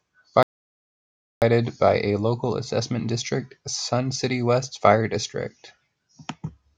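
Speech that cuts out abruptly at 0.43 s into dead, total silence with no room tone, then resumes mid-flow at 1.42 s on "by a local assessment". This is an audio dropout to silence losing about 0.99 s, likely from the input being lost while the recorder kept writing zeros.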